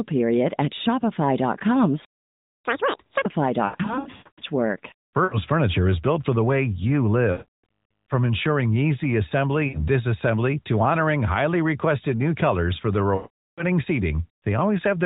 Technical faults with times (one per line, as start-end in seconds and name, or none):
2.05-2.65 playback stall
2.65-3.26 catch-up at higher speed